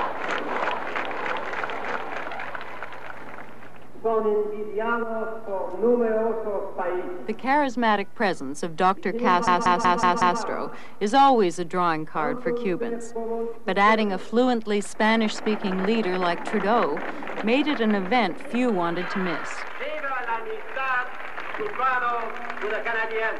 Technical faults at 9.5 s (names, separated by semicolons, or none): system hang loop